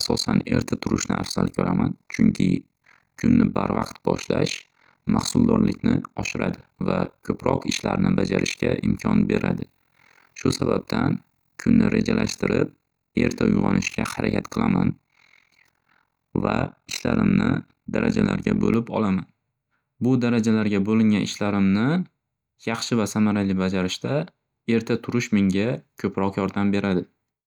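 From 0.0 to 18.76 s, overlap-add ripple: mismatched frame overlap swings the level by about 60 dB near 40 Hz. It sounds like robotic flutter and shows as evenly spaced vertical stripes on a spectrogram.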